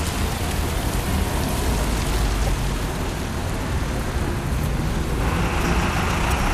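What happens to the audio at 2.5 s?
Right around there, from 2.44 to 2.49 s, there's a short burst of damaged data in the compressed stream: some bytes got corrupted, so the decoder misreads those frames, loses sync and hunts for the next frame header. You hear it as a quick chirp, squawk, click or short hole.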